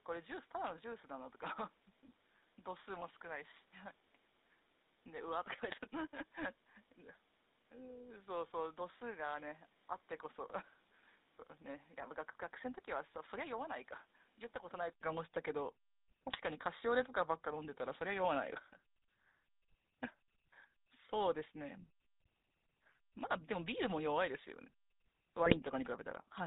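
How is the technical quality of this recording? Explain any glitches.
Pretty rough, honestly. It's speech squeezed through an old phone codec the whole way, with a device change partway in and three short bursts of transmission damage.

GSM full-rate codec: Throughout, the sound has that buzzy, gravelly edge. The 13 kbps codec rebuilds the voice from a vocal-tract model driven by sparse regular pulses and throws away everything above 4 kHz, so it's grainy and band-limited, and clearly audible.

Input switched to a poorer device: From the start until about 15.01 s, the audio is duller and a bit quieter, with a faint extra noise floor well below the signal. There's an 80 ms gap at the switch, after which it clears up. That's likely the input swapping to a lesser microphone or a headset profile.

GSM bit errors: Three brief spots at 5.67–5.75 s, 16.29–16.38 s and 25.46–25.57 s break into squawky, gargly pops. 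Corrupted bits hit the decoder's filter, pitch and gain values over a few frames, so the spectrum and level lurch for a moment.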